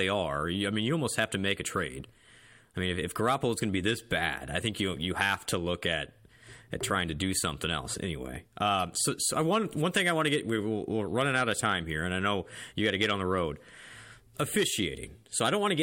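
Speech recording with no audible technical faults anywhere.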